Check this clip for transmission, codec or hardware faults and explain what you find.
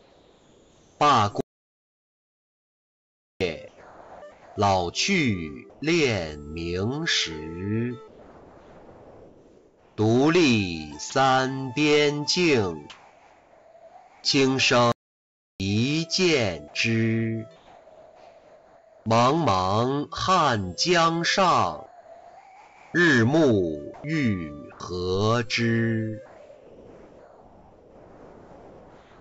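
Four kinds of fault are audible: repeated stretches of synthetic background, two silent stalls, one clipped sound, and a choppy passage. Nothing is heard above 8 kHz, which fits the G.722 call codec on this path.

Comfort noise in place of the background occurs at 0.0 to 1.0 s, 3.68 to 5.82 s, 8.08 to 11.12 s, 12.90 to 14.24 s, 17.56 to 19.06 s, and 26.26 s to the end. The real background gives way to flat, featureless hiss about 2 to 4 dB quieter. This is likely discontinuous transmission, with the receiver synthesising noise. Unlike a stall, the pause is never fully silent.

A playback stall occurs at 1.41 to 3.41 s (2 s) and 14.92 to 15.60 s (0.68 s). The output goes completely dead in mid-flow, then resumes, probably because the player's buffer ran dry. True silence, with no hiss at all, distinguishes these from comfort-noise gaps.

Sound dropped by the voice detector occurs at 11.10 s. 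A 20 ms stretch of sound is swapped for comfort noise, likely because the detector judged it background. It is a single clean clip, not repeated switching.

Sound chopped by the voice detector occurs at 21.86 to 24.80 s. About 1.3 s in total is lost in pieces, because the detector likely toggled more than once. The sound stutters, unlike the one-off drop at 11.10 s.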